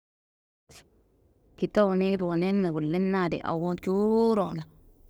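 Speech that fades in smoothly between about 0.5 s and 0.72 s, then from 3.56 s to the end shows pre-emphasis left on. The treble lift applied for transmission was never undone by the matching de-emphasis, and the tilt fits a 50 µs FM curve, raising 10 kHz about 10 dB above 1 kHz. The final stretch turns thin and bright, with sibilants hissing harder than before 3.56 s.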